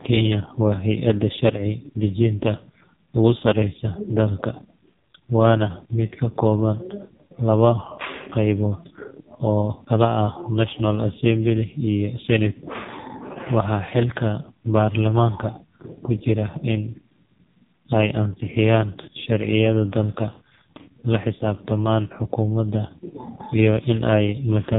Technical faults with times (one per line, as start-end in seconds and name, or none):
0.00-24.79 AMR narrowband mobile codec